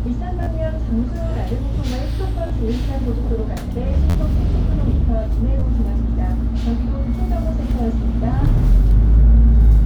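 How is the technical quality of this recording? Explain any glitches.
The recording has four short playback glitches, all repeated buffers. They occur at 0.43–0.46 s, 2.47–2.50 s, 4.10–4.15 s and 5.60–5.62 s. Each time, fresh audio failed to reach the output, so the device replayed its last block of about 11.6 ms, which fits a 512-sample buffer. That block repeats three, two, four and two extra times respectively, with a hard join at each repeat. With blocks this small, each event sounds like a brief buzzy click rather than a clear stutter, and roughly 20 to 50 ms of sound is lost each time.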